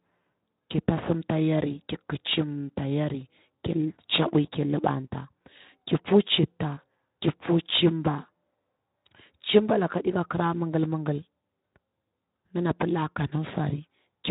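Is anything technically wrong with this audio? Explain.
No, nothing is technically wrong: the speech comes through a Speex codec at 15 kbps with only light coding damage and a bandwidth that stops near 3.8 kHz, as expected for that setting.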